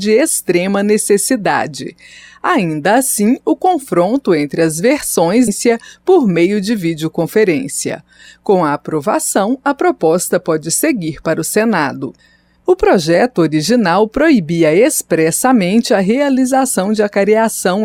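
At 5.47 to 5.50 s the audio jumps abruptly forward with a small blip, a stream segment skipped, most likely because one segment failed to load and playback resumed at the next.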